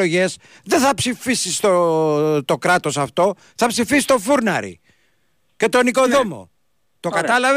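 No dropouts, distortion, noise bursts or other technical faults can be heard anywhere in the speech recording.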